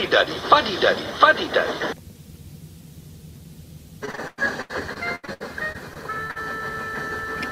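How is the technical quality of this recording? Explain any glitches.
The one clear problem is a burst of repeated packet loss (robotic sound) from 4.05 to 6.37 s. Over that stretch there are about a dozen short dropouts, the longest around 100 ms. Each is patched by stretching the last bit of sound, so roughly a fifth of the stretch is filler. That leaves the audio choppy, with pieces missing.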